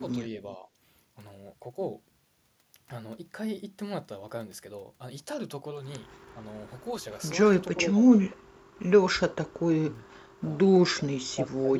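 Speech dips slightly at 0.2, 0.57 and 6.34 s, then nearly vanishes at 7.75 to 8.43, 10.06 to 10.36 and 10.89 to 11.77 s. That's likely speech suppressed in double talk, with the echo canceller ducking everything.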